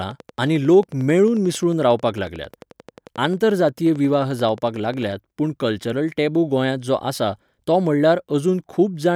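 A steady ticking rides over the speech from 0.02 s to 5.13 s, about fifty clicks at a regular 11.2 per second, peaking roughly level with the voice and audible in pauses too. It stops just before "पूण कल्चरल टेबू गोंयांत". This train of clicks is likely interference from nearby equipment or a faulty connection or power supply.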